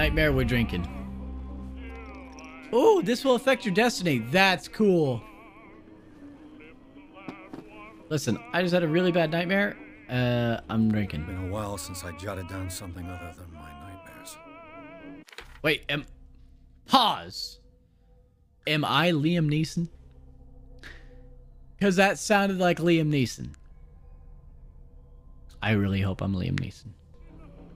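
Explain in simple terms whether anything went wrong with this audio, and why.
Nothing went wrong technically: the signal stays steady and intact the whole way, with no breaks, glitches or distortion anywhere in it.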